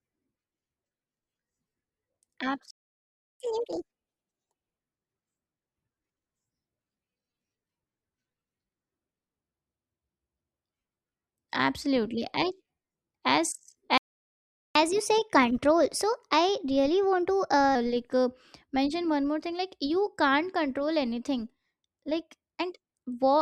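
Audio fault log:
2.71–3.40 s, playback stall: the speech cuts out mid-flow for about 0.7 s of silence, then picks up again. Most likely the player ran dry of buffered data, or its audio thread got blocked, so nothing reached the output until it recovered.
3.40–4.79 s, catch-up at higher speed: right after that gap the speech runs at 1.5 times normal speed, and pitch jumps up by roughly seven semitones, giving a chipmunky rush. The player is resampling its backlog faster to win back the lost time.
13.98–14.75 s, playback stall: another dead gap mid-sentence, about 0.78 s this time, before the audio resumes. Likely the same culprit, a starved buffer or a blocked playback thread.
14.75–17.75 s, catch-up at higher speed: this time it's a gentler 1.1 times speed over three seconds, with the pitch raised by around a semitone and a half. It comes across as a slightly hurried, high delivery, starting right at "like uh mention one".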